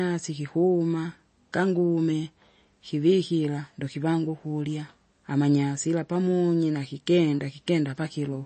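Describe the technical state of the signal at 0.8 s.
At 0.8 s, like the rest of the clip, the speech has that watery, swirly edge and nothing above about 8.3 kHz, likely from MP3 compression at a bitrate as low as 32 kbps.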